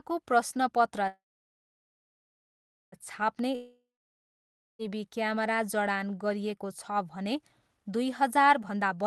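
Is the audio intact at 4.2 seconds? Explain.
No, 4.2 s falls inside what sounds like a long network dropout, running from about 3.55 to 4.96 s. Audio most likely stopped arriving, so the receiver stretched the last bit of sound into a fading buzz, and by 4.2 s that has already died away to near-silence. Roughly 1.2 s of the original is simply gone, and the speech picks up again after the gap without it.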